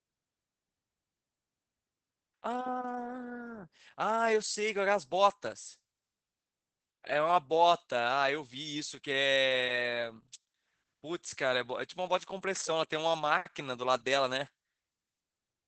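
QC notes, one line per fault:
Throughout: Opus voice compression. The speech is cut off near 8 kHz, so it sounds dull and lacks air. The damage is plainly audible. Voices come out hoarse and slightly robotic. The SILK coder models the voice with linear prediction and codes its excitation coarsely, which roughens the sound. The band limit and coarseness fit a wideband setting near 12 kbps with 20 ms frames.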